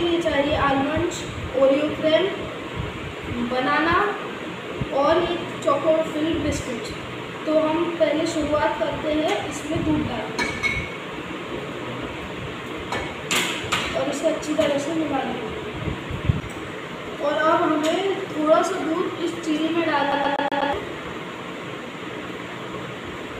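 At 20.12 s the player gets stuck on one turn of the disc: a scratch knocks the laser back a track at the same point on every rotation, so it keeps rereading the same spot until 20.73 s. The result is a fast, even stutter, with a fragment of about 0.12 s of audio repeating five times, each repeat cut off by a brief mute at the jump, like a skipping CD.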